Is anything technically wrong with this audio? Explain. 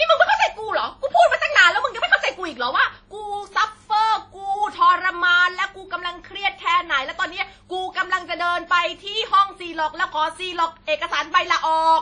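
Yes. Throughout the clip, the speech carries damage that is likely WMA compression. Nothing is present above about 10.1 kHz. The speech has a ringing, washy smear, and a hiss rises and falls with the speech. A transform codec working in long blocks spreads its quantisation noise over tens of milliseconds around each sound, and weak spectral lines are discarded. The damage is plainly audible, which fits a low bitrate of around 32 kbps.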